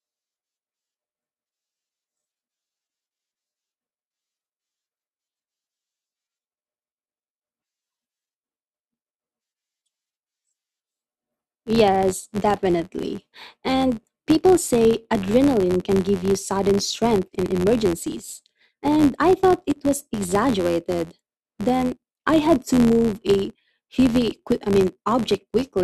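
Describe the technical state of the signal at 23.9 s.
At 23.9 s the speech carries a filter restarted on every block fault. It is not confined to that moment; it runs through the whole clip. The filter drops its stored state at each block boundary and starts again from silence. Each block therefore opens with a small transient. These repeat at about 86.1 Hz, which fits a 512-sample buffer. The result is a low, steady buzz that rises and falls with the speech level.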